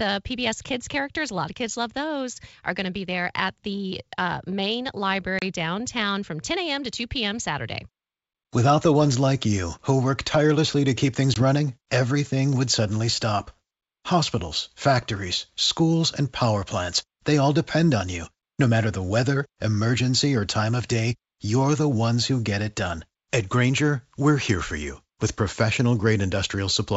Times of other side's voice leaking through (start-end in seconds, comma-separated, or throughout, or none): none